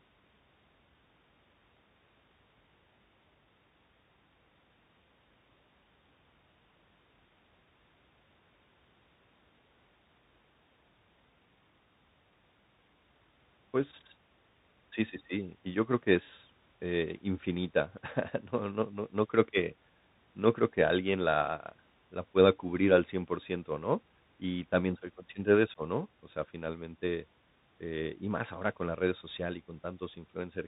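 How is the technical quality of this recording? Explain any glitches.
The recording is clearly compromised by a Bluetooth CVSD headset codec running throughout the speech. This narrowband scheme encodes each sample as a single up-or-down bit with an adaptive step size, which fits a 64 kbit/s stream. Everything above 4 kHz is gone, loud high-frequency passages overrun the step and distort, s sounds come out scratchy, and a granular hiss sits beneath the voice.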